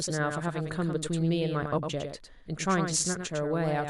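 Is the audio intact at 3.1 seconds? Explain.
No. At 3.1 seconds, as throughout the speech, a doubled audio track is present: a second full-band copy of the same speech trails the original by about a tenth of a second, roughly 5 dB quieter. The copy carries no decay or room colouring, so it reads as a crisp slapback rather than reverberation. The likely cause is the signal being captured a second time through a slower path and mixed back in.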